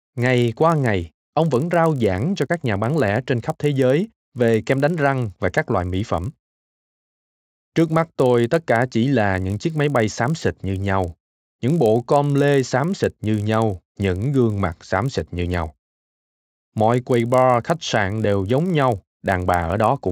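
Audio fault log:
throughout, resampler restarted on every block: the sample-rate converter, which fits a step from 16 kHz up to 48 kHz, was started fresh for each 20 ms block, so at every block edge it worked from silence or wrapped-around samples instead of the true neighbours. Each edge therefore carries a small error, and at 50 per second these tick-like errors merge into a steady 50 Hz buzz that rides along with the speech and drops away in the gaps between phrases.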